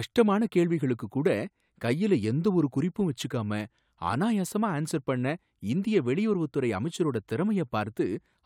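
No technical fault can be heard anywhere in the speech recording, with the signal staying intact and continuous across its whole duration.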